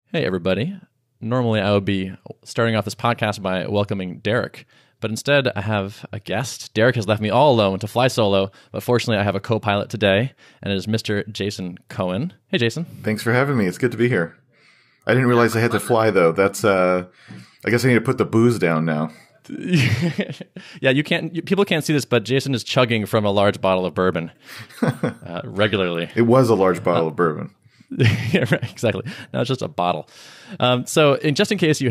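No technical faults can be heard anywhere in the recording.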